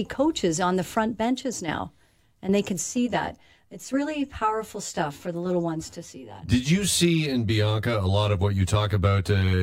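From 2.8 s, after "now and they can", channel delay (comb filtering) sets in. One channel lags around 10 ms, carving notches from near 40 Hz. Speech turns hollow.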